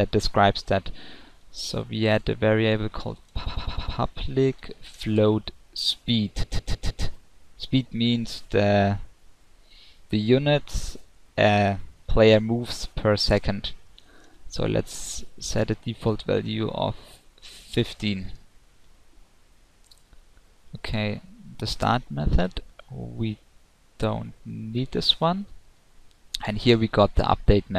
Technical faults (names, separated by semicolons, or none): repeated frames